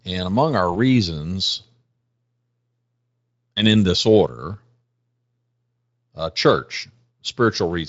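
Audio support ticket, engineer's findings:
VoIP packet loss concealed by the speech codec, 0.73–0.76 s, just after "among our". About 20 ms of audio missing, which fits a single dropped frame. The Speex decoder, carrying light coding roughness, bridged the gap by extending its last pitch and filter at falling gain. The result is a brief stretched, fading smear, with recovery lagging as later frames rebuild from the guessed state.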